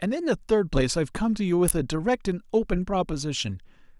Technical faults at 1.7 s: electrical switching spike

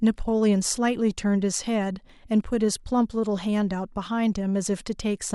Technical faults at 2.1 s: overlap between stream segments

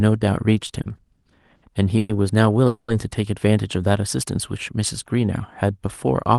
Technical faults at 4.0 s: none

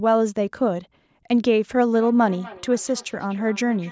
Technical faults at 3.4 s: feedback echo between two devices

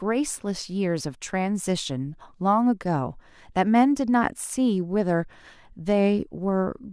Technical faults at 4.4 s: none

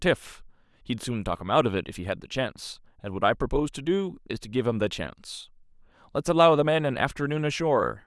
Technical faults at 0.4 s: none

